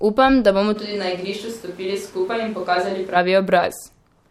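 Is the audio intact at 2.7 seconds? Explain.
No. At 2.7 seconds the speech sits inside a switch to a distant microphone that runs from 0.77 to 3.14 s. The change in and out is abrupt. The voice turns roomy and hollow, loses low end, and drops by about 5 dB. Background noise rises to roughly 20 dB below the speech. This is likely the close microphone's signal dropping out, leaving only a pickup farther away that hears more of the room.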